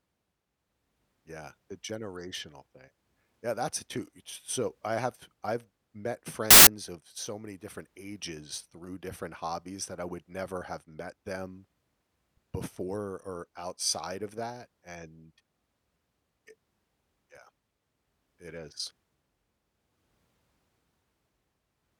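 At 6.51 s, file tags played as audio: an embedded cover picture is decoded as samples, producing a 0.16 s burst of very loud white noise with abrupt edges.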